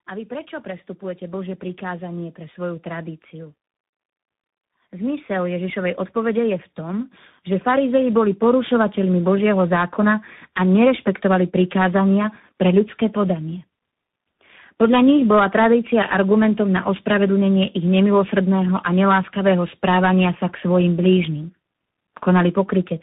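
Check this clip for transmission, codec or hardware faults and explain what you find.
One fault runs through the whole clip: tandem speech coding. The speech sounds rough, noisy, muffled and warbly, with nothing above 3.8 kHz. It was coded and decoded in turn by G.729A at 8 kbit/s, G.711 mu-law, then CVSD at 64 kbit/s, each coder compounding the previous one's damage.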